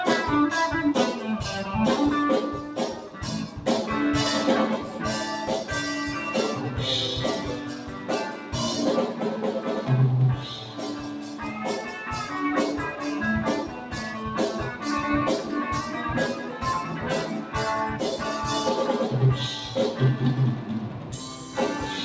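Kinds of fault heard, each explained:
Noise suppressor applied to music or sounds: Sustained and decaying parts of the sound keep dipping and recovering by about 5 dB, giving a pumping, thinned character while sharp attacks pass intact. A speech-tuned noise suppressor left in the chain treats steady content as noise.
Sound cut by the noise suppressor: Short sinks of about 4 to 5 dB, mostly about 0.2 s long, fall at 2.97, 7.59 (about 0.5 s), 8.33, 11.2, 13.68, 20.86 and 21.37 s. At these moments the suppressor judged steady or fading passages to be noise and pulled them down harder.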